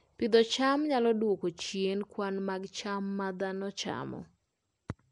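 Speech with Nellymoser compression throughout: a rough, hissy noise-filled halo, a smeared underwater tone and nothing above 10.6 kHz, likely from Flash's Asao codec. The hiss, rather than MP3-style warbling, sets it apart.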